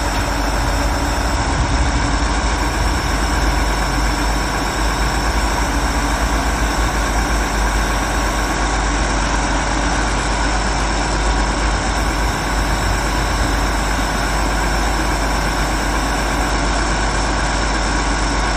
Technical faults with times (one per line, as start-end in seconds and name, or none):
1.35-2.57 Bluetooth SBC bit pool drop
8.54-11.97 Bluetooth SBC bit pool drop
16.50-18.56 Bluetooth SBC bit pool drop